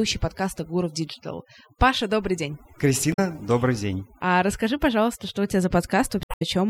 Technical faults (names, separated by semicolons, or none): overdone noise removal; damaged data in a compressed stream